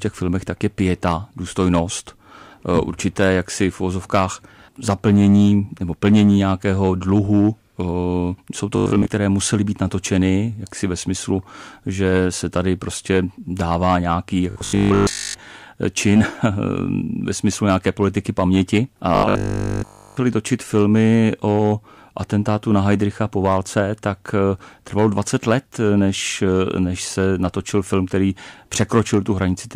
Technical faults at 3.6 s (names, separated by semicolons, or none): hard clipping